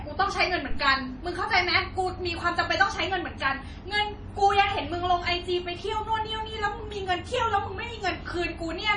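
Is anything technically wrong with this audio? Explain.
Yes, heavy MP3 compression runs through the whole speech clip. Nothing comes through above 10.6 kHz, and there's a watery, swirly smear with chirpy s sounds, likely from an encoder starved of bits, which fits roughly 32 kbps, cutting the treble and dropping weak detail frame to frame.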